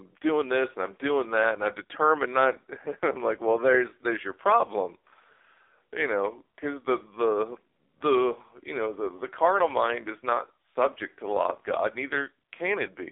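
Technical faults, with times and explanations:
Throughout, AMR narrowband mobile codec: heavily buzzy, synthetic speech with nothing above 3.8 kHz, which fits low-bitrate AMR-NB coding modelling the vocal tract from sparse pulses.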